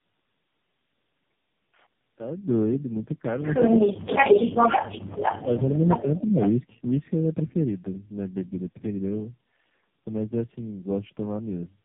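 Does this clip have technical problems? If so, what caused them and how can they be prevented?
Yes. The clip is speech and shows three kinds of fault.

Tandem speech coding runs through the whole clip. The speech sounds rough, muffled and warbly, with nothing above 3.6 kHz. The texture fits three low-rate speech codecs in a row, probably AMR-NB followed by G.729A and AMR-NB again, joined by G.711 links. Each coder strips detail from the previous one's output, so the damage compounds beyond what any single codec would cause. Preventing it means keeping the call in one codec end to end, through transcoder-free operation or codec negotiation.

Speech suppressed in double talk appears four times: 3.89–4.09 s, where the voice drops by about 35 dB; 4.47–5.02 s, by about 10 dB; 5.43–5.82 s, by about 5 dB; and 6.00–6.36 s, by about 15 dB. Each dip lasts a fraction of a second. The likely cause is an echo canceller that could not separate the near talker from the returning echo while both were active, so it turned the whole signal down. 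A canceller with reliable double-talk detection and gentler suppression would prevent this.

Echo leak is heard as a copy of the speech delayed by about 0.46 s. From 4.07 to 5.77 s it is about as loud as the direct speech. It returns at 5.98–6.19 s at about 20 dB down and at 6.36–6.49 s at about 10 dB down. This is likely a loudspeaker endpoint whose echo canceller let part of the microphone pickup through and sent it back. Using a headset, lowering the loudspeaker volume, or fitting a better-converging echo canceller would prevent it.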